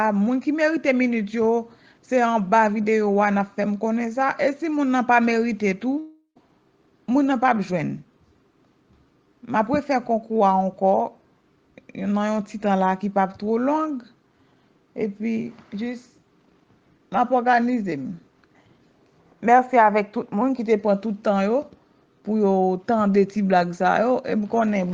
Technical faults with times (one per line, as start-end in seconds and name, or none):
5.99-6.37 long network dropout